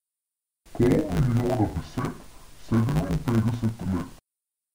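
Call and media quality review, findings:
Speech dull and robotic for the whole clip, with a steady 100 Hz buzz and no obvious octave drop. Looks like interleaved audio read as planar: 10 ms blocks split into left/right halves, so the block rate shows up as buzz. Check the format conversion step.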